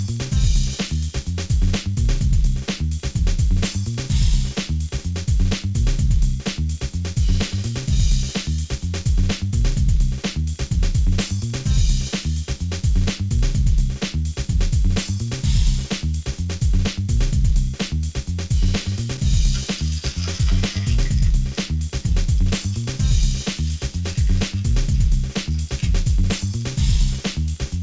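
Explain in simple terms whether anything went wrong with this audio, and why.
Nothing went wrong; no faults can be heard here.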